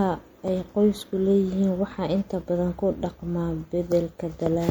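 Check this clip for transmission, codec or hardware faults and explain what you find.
One fault runs throughout: MP3 compression, likely short of bits at around 64 kbps. The encoder switches weak frequency lines on and off between frames, so the speech sounds watery and swirly, with metallic s sounds.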